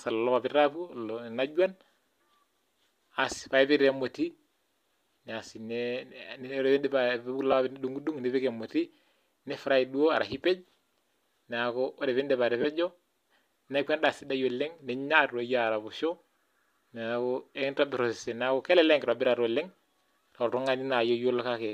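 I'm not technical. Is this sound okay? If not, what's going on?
No. There are lost LE Audio frames: a tiny gap at 7.52 s and a longer one from 12.62 to 12.65 s. The Bluetooth decoder patches each missing piece with a noisy copy of the preceding sound, heard as a brief smear. The lengths suggest one and three lost short frames of about 7.5 ms each, as the link was likely using LC3 compression.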